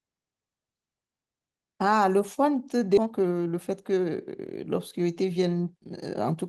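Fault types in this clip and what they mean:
Skip ahead: at 2.97 s the speech lurches forward with no gap, as about a second of audio is dropped and the two sides are joined almost directly. That stretch was lost while later audio was already queued, cutting the delay sharply.
Jitter buffer speed-up: from 3.01 s to 6.34 s the speech runs hurried at unchanged pitch, about 14 percent fast. The buffer still held more audio than it aims for, so short pitch-period pieces were trimmed repeatedly, removing roughly half a second overall.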